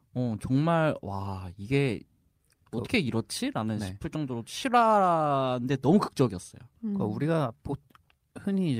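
Clock drift between sender and receiver runs through the whole clip. The sending device's audio clock is running slow, by roughly 4 percent, so samples reach the receiver more slowly than it plays them out. Its jitter buffer keeps draining toward empty, and the receiver has to keep stretching what it has to avoid gaps. The result is small, uneven timing hiccups spread across the speech.

Repeated timing corrections follow from that drift, running from 0.10 s to 8.77 s. To keep pace with the slow sender, the receiver repeatedly inserts short duplicated fragments, always lengthening and never cutting, at irregular spacing. Together they add roughly 0.3 s, so the speech plays at about 97 percent of its proper speed. Each repeat is brief, heard, if at all, as a faint stutter or a slightly dragging, unsteady rhythm.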